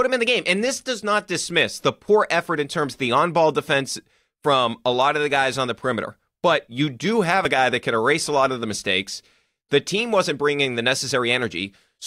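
At 2.47 s and again at 7.45 s the speech jumps forward abruptly, with about 20 ms dropped each time and the two sides butted together without any silence. The two skips sit roughly 5 s apart. That regular spacing points to audio missing between chunks: the recorder or processor likely handles the sound in 5-second blocks and loses a brief slice each time one block closes and the next begins.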